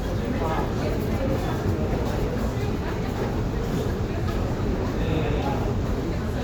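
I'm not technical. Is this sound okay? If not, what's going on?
Yes, this one's fine: nothing in it jumps out as a technical problem, so you can relax about it.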